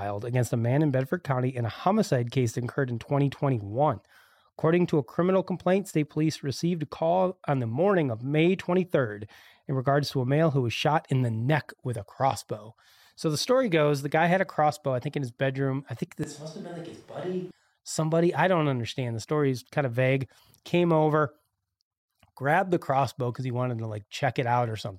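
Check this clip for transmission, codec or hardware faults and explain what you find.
One fault stands out, in the speech between "his bedroom I think" and "somebody I don't understand". From 16.24 s to 17.51 s the sound turns roomy and hollow, with thinner bass. The level drops by roughly 10 dB. Room noise rises to around 25 dB below the speech. The change is abrupt at both ends. The likely cause is a switch to a distant microphone. The close mic's feed dropped out for that stretch, so a mic further away picked up more room than source.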